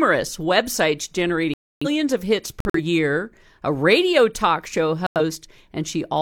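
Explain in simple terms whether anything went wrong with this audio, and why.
Three sudden gaps of silence cut into the speech: from 1.54 to 1.87 s, just before "of hits"; from 2.60 to 2.80 s, just after "of hits"; and from 5.07 to 5.21 s, after "a radio talk show". This is corrupt frame muted. Damaged chunks of compressed data were rejected by the decoder, and the player filled each one with silence. The hard starts and the gap lengths fit whole frames being dropped, and the speech keeps its timing around the holes.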